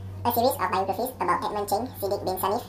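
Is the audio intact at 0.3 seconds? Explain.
No. At 0.3 s the speech is affected by a wrong sample rate fault that runs through the whole clip. The samples are played back at twice the rate they were captured at, with no conversion, which fits 24 kHz material played at 48 kHz. Speed and pitch both shift by that 2.0 ratio, so the speech runs at double speed and sits 12 semitones, a full octave, higher, sounding squeaky and hurried.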